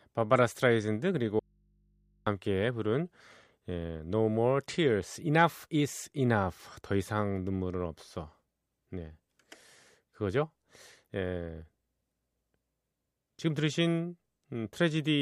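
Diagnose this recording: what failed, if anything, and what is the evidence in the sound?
An audio dropout to a faint residue runs from 1.39 s to 2.27 s. The speech cuts off abruptly and returns just as suddenly about 0.87 s later. The gap is not silent: it holds mains hum, roughly 40 dB below the speech level. That hum points to an open, unterminated input while the path downstream stayed live. The likely stage is analogue wiring, such as a connector or cable briefly losing contact and leaving the input floating.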